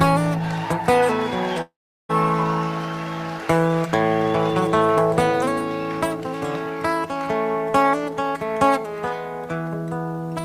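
At 1.61 to 2.11 s, a long network dropout likely halted the audio. The last sound fades as a buzz or hiss into silence, and 0.48 s is lost.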